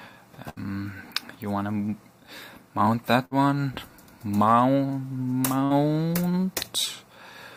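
Three brief dropouts, at 0.49 to 0.67 s, 3.25 to 3.34 s and 5.65 to 5.73 s, where the last sound is held and fades before the audio jumps ahead. These are bursts of packet loss: the receiver concealed each gap for about 55 to 67 ms, and about 60 ms of audio is missing each time.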